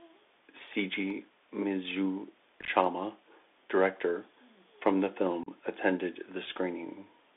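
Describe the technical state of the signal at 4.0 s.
At 4.0 s, as across the whole clip, the speech is squeezed through a Bluetooth CVSD headset codec. One-bit adaptive delta coding, banded 300 Hz to 3.6 kHz, leaves it muffled, grainy and audibly distorted.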